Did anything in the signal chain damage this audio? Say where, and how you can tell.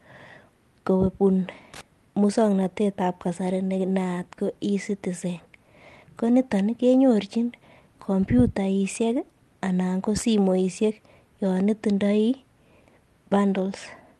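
Yes, loose connector crackle in the analogue wiring, 1.74 to 1.81 s, before "muswoknatet ab kasari ne". A flickering contact chops the signal, leaving jagged waveform spikes and broadband vertical spectrogram streaks.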